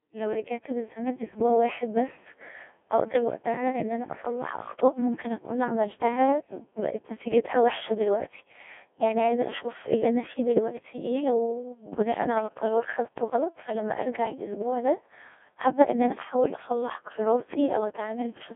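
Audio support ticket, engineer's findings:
Codec 2 vocoder damage throughout. Robotic, buzzy speech, nothing above 3.6 kHz. Voice is resynthesised from sine waves, not the waveform. Heavy artefacts fit a very low bitrate, around 1.2 kbit/s.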